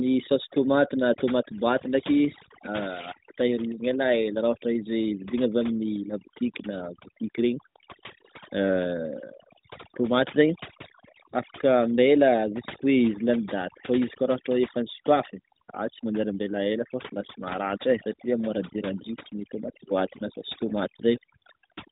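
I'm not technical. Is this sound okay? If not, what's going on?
No. Throughout the clip there is overdone noise removal: a cleanup tool was set too strong, leaving near-silent gaps with twinkling specks, unlike the phone-line muffling.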